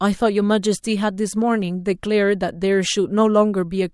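No technical faults are audible in this speech recording.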